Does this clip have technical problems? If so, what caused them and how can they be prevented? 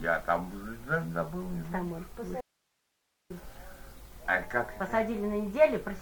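Yes. An audio dropout to a faint residue runs from 2.41 s to 3.30 s, losing about 0.89 s of sound. Both edges are abrupt, so it is not a pause or a fade. The gap also keeps a hiss some 45 dB below the signal instead of going to digital silence, which shows the path after the break stayed live. The likely cause is a brief loss of the source feed, such as a loose connector or a wireless link that cut out. Secure the cabling and monitor the link margin to prevent it.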